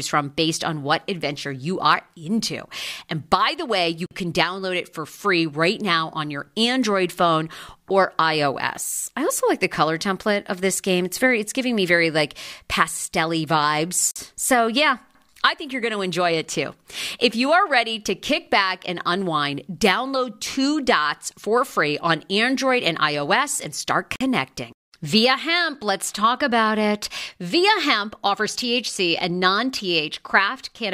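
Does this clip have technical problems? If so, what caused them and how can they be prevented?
Yes: a gap between chunks at 4.06, 14.11 and 24.16 s. Each is a 48 ms silence about 10 s apart, where 10-second chunks were joined with a pause. Unlike a dropout, no speech is lost. Trim codec padding and schedule each chunk to start seamlessly at the previous one's end.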